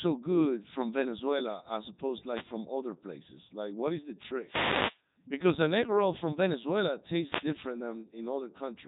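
Throughout the speech, a Codec 2 vocoder rebuilds the voice from sine waves, likely near 3.2 kbit/s. It sounds robotic and buzzy, with nothing above 3.8 kHz.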